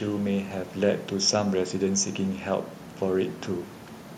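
No technical faults are audible in this speech recording; the only background is the room's own ambient noise, sitting about 26 dB below the speech.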